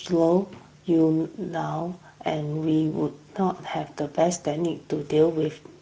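From the first syllable to the end, the speech carries Speex codec damage, and it's plainly audible. Speex models the voice with CELP, so at a middling setting like this one, which fits roughly 16.8 kbps, the excitation signal doesn't get enough bits to be rebuilt cleanly. You hear that as a grainy, hoarse edge riding on every voiced sound, with a noisy texture under the speech rather than a clean tone.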